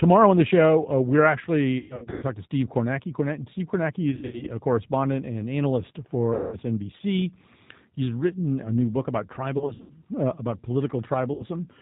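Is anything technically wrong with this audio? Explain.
Yes. The whole clip is coded with the G.729 codec at 8 kbit/s. Its filter-and-pulse reconstruction removes everything above 4 kHz and leaves the speech plainly rough and synthetic.

VoIP packet loss concealed by the speech codec occurs at 1.78–2.25 s (after "the show uh we're", before "talk to"), 4.11–4.49 s (before "a correspondent and analyst"), 6.34–6.58 s, 9.58–9.93 s (after "a new book about", before "uh about") and 11.34–11.46 s. Between 60 and 300 ms goes missing each time. The decoder extends its last pitch and filter with falling gain, producing fading buzzy or noisy smears that stay distorted briefly after recovery.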